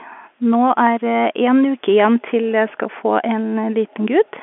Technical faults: none

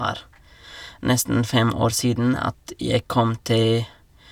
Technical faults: none

